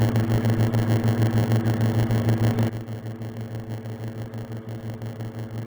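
From the first moment to the end, the sound carries a steady 100 Hz buzz. That is a block size mismatch with padding. One stage hands over blocks that are shorter than the next stage expects. The shortfall in each block is filled with silence, so a tiny gap recurs 100 times per second. Those gaps form the buzz. They also stretch the audio, which plays at about 0.92 times normal speed while keeping roughly its normal pitch.

At 2.69 s the level drops abruptly by about 11 dB and stays down until the clip ends. The sound and the background noise fall together, in a single step with no fade. That points to a sudden gain jump, a digital gain change applied from one sample to the next. The likely cause is a gain setting or bit shift taking effect without a ramp.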